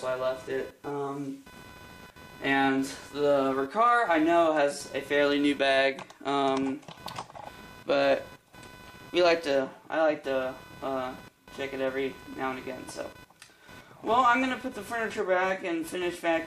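The audio carries computer activity noise all the way through, a pulsing interference around 500 Hz sitting roughly 25 dB under the sound, from processor or graphics load shifting the shared audio ground.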